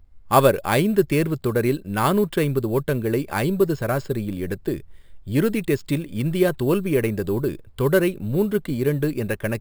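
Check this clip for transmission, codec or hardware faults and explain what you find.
One fault is present, running through the whole clip: imaging from sample-and-hold upsampling. The speech appears to have been raised from a 12 kHz rate, which fits each sample being repeated without any smoothing filter, so mirrored copies of the spectrum sit above the original band. The lowest copy fills 6 to 12 kHz at about 22 dB below the speech, heard as a bright metallic fizz that tracks the speech level and slides opposite to its pitch.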